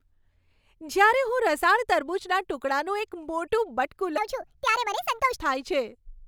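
A stretch of the recording was likely played back against the wrong clock, running it at 1.49 times its recorded speed: a section at the wrong speed from 4.18 s to 5.39 s. Because speed and pitch move together, the speech in that window jumps up by roughly seven semitones and turns hurried and chipmunk-like, then drops back to its natural pace and pitch the instant the section ends.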